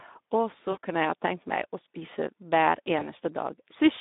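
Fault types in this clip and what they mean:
Speex codec: narrowband CELP coding confined to 200 Hz–3.7 kHz, with the hoarse, noisy roughness that fits a low setting near 11 kbps.
VoIP packet loss concealed by the speech codec: the decoder stretches then fades the sound at 0.71–0.77 s and 2.99–3.12 s, covering about 40 ms and 20 ms gaps.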